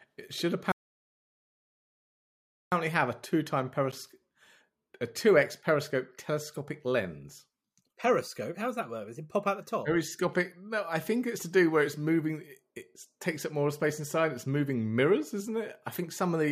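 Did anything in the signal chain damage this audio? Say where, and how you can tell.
Yes. The speech cuts to silence from 0.72 to 2.72 s, resuming at "have a". This playback stall likely came from the player starving for data or being blocked.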